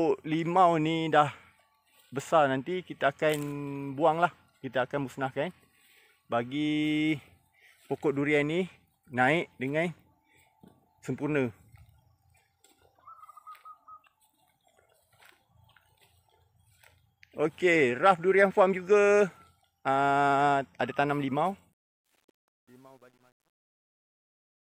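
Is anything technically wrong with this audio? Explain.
Yes. From 21.72 s to the end at 24.69 s, the fade-out shows truncation distortion. The fade's gain curve is smooth, but the stage applying it discards low-order bits without dither, which points to a word length of around 10 bits. As the level sinks toward the smallest step, the waveform collapses into coarse square steps. From 22.4 s to 24.7 s the tail turns gritty.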